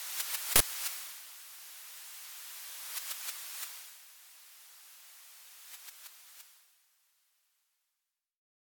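At 0.56 s, a block of audio memory was sent to the output before any real signal had been written into it, so whatever values were left over in that memory were played as if they were samples. This uninitialised buffer lasts until 0.60 s, about 46 ms, which fits a 2048-sample buffer. It is heard as a sudden, loud burst of harsh digital noise that cuts across the sound and then stops abruptly.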